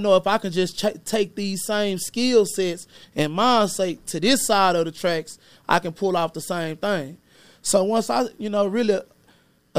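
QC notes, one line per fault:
No technical faults are audible in the signal, which stays continuous and stable at a consistent level across the whole recording.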